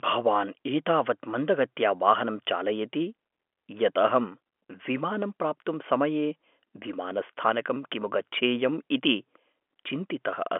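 No technical faults can be heard in this speech. The G.711 telephone coding gives it the narrow line band of roughly 250 Hz to 3.4 kHz, with nothing above about 3.6 kHz.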